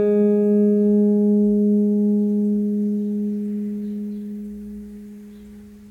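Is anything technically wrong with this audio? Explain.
No, nothing here stands out as a technical problem; the music just sounds the way it should.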